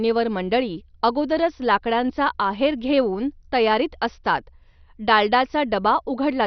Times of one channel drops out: none

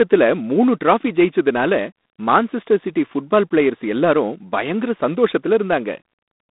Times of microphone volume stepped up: none

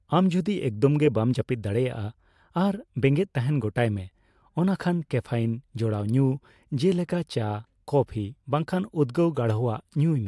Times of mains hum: none

